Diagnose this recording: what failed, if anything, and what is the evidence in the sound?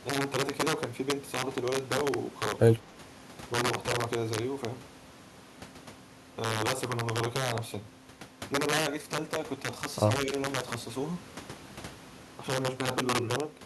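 Integer overflow in sample-format conversion: gain about 10 dB too high makes the loudest peaks wrap to the opposite sign, producing violent cracks throughout this speech.

Call processing likely suppressed speech in double talk: from 2.82 to 2.97 s the voice dips by around 10 dB as the echo canceller turns down both talkers.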